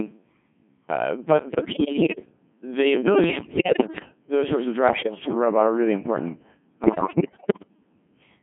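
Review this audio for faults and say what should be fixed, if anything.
The whole clip of speech has gone through a Codec 2 vocoder, and it's heavily damaged. The decoder rebuilds the voice from sine waves using just pitch, voicing, energy and a rough spectral envelope, so it sounds robotic and buzzy throughout, squeezed into roughly 150 Hz to 3.4 kHz. The thinness points to a very low rate, around 1.6 kbit/s. To prevent it, record from the source or use a higher-rate codec that keeps the waveform.

On top of that there are four bursts of bit errors on digital voice radio: 1.49 to 2.26 s right after "uh but", 3.24 to 4.05 s, 4.88 to 5.35 s between "those sorts of" and "robot are really important", and 6.84 to 7.68 s just after "robot are really important". At this low rate every flipped bit can change a whole frame's pitch, level or tone, so these stretches jump, warble and bleep into gibberish. 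The last burst sounds worst, with roughly a fifth of the bits wrong. To prevent it, get a stronger link or add error protection so the vocoder isn't fed corrupted frames.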